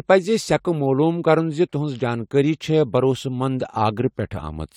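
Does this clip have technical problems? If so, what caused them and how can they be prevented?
No, this clip has no technical problems, so there is nothing to trace to a cause or prevent.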